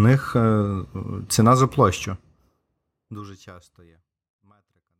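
No faults in this speech clip, just a smooth editorial fade-out from around 2 s to the end with no click or hard edge.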